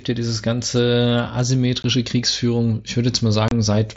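A short speech recording carried over a Bluetooth mSBC headset link, band-limited to about 8 kHz, shows sample clock jitter from 0.0 to 1.5 s. The converter's clock wanders by roughly half a microsecond, so steep, loud or bright passages pick up a faint hiss about 45 dB below the signal. On a spectrogram this appears as a thin haze of broadband noise that tracks the speech energy and disappears in pauses. Unconcealed Bluetooth headset packet loss opens two abrupt holes: about 15 ms at 1.83 s, consistent with a couple of dropped packets, and 30 ms from 3.48 to 3.52 s, pointing to roughly four. Nothing was patched in, so each gap has hard edges. The waveform shows abrupt dropouts with sharp cliffs, and the spectrogram shows brief vertical breaks.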